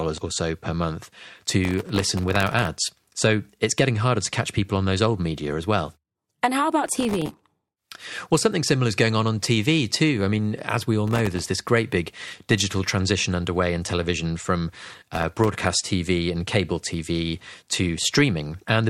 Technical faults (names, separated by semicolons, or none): processor overload crackle